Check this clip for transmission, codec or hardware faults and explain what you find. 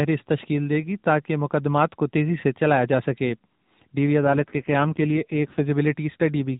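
One fault stands out in this speech clip, heard against the band-limited sound of a narrowband mobile codec carrying it.

AMR rate drop, from 4.24 s to 5.72 s: the link appears to have forced the codec down to a leaner mode, which fits a step from 12.2 kbps to about 5.9 kbps, with the freed bits going to error protection. The bandwidth holds steady and nothing drops out, but the voice turns coarser and buzzier, more synthetic, until quality recovers at 5.72 s.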